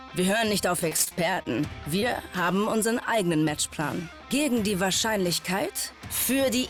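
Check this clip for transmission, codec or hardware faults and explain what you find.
Two transmission faults can be heard, both from packets lost on the way to the decoder.

From 0.79 to 1.47 s the sound turns choppy, with pieces dropping out. This is repeated packet loss, with robotic sound. Gaps of up to 31 ms arrive in quick succession, and the receiver patches each one by stretching the last sound. About 152 ms is filled in, roughly a quarter of that stretch, and the pattern suggests around seven separate holes.

From 2.00 to 2.04 s there is a brief smear or wobble. This is short concealed packet loss. About 20 ms of audio failed to arrive in time, and the decoder continued the preceding sound for roughly 17 ms before blending back into the real signal.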